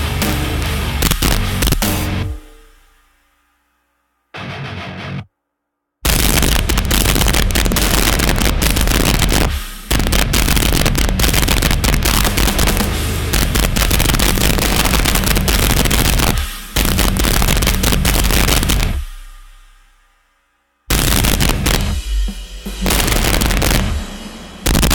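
Right through the clip there's integer overflow. The signal was pushed about 3 dB past full scale, and instead of being held at the limit, the loudest peaks wrapped round to the opposite sign. Each one jumps across the whole range. Only a small share of samples goes over, a few percent, so it's the loud moments that crack, and they crack hard, far harsher and spikier than ordinary clipping would sound.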